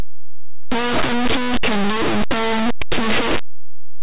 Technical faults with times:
0.00-4.02 linear audio read as companded

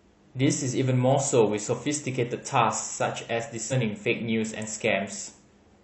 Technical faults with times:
3.67-3.73 damaged data in a compressed stream

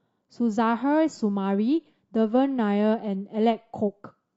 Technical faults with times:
1.79-4.37 adaptive stream at a lower bitrate

